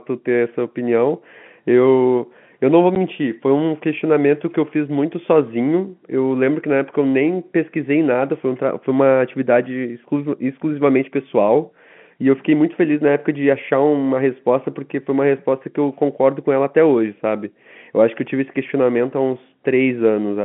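At 2.95 s there's a single short dropout, packet loss filled with silence: one 10 ms packet went missing and the receiver just played nothing in its place, so the speech has a tiny hole with hard edges. It's all heard through a G.711 telephone band, roughly 150 Hz to 3.5 kHz.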